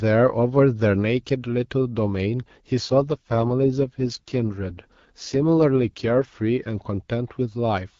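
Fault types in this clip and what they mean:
AMR rate drop, 2.79 to 6.28 s: a weak radio link makes the network push the AMR-WB coder down to a lower rate and spend bits on error protection. The band and continuity stay intact, but speech turns rough and synthetic, consistent with a fall from 12.65 to 6.6 kbit/s, before clearing again.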